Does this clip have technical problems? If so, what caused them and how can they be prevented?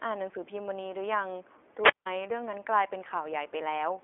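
Yes. Throughout the clip the speech sounds thin, boxed-in and slightly rough and synthetic, with nothing below about 300 Hz or above 3.4 kHz. That is iLBC codec damage: each 20 ms frame's excitation is coded independently at a low rate, consistent with the 15.2 kbps mode. To prevent it, record or transmit through a wideband codec instead of a narrowband VoIP path.

From 1.82 to 2.06 s there is a wireless microphone squelch dropout. A brief rise of hiss gives way to a hole of near silence lasting 171 ms before the speech returns. The radio signal faded until the receiver's squelch muted the output. To prevent it, keep the transmitter in clear line of sight and within range, and use diversity receivers.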